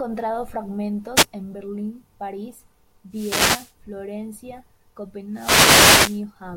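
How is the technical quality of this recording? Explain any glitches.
The recording has three wireless microphone noise hits, at 1.15 to 1.25 s, 3.10 to 3.74 s, and 5.32 to 6.24 s. Each is a burst of static over the speech. The first is a brief swish. The later two last longer. An analogue FM radio link fades when reflected signals cancel. Receiver noise then rises and, in deeper fades, breaks into clicks that bury the voice.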